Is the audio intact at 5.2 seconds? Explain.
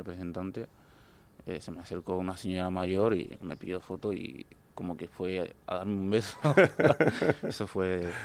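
Yes, the audio at 5.2 seconds is intact, with no dropout, click, distortion or other fault at that moment.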